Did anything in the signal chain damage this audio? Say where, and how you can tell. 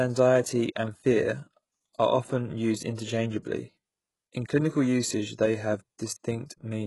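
Yes: codec stage, likely HE-AAC compression. Throughout, s sounds turn metallic from copied-up treble, unlike a plain low-pass, and everything stops at 11.5 kHz.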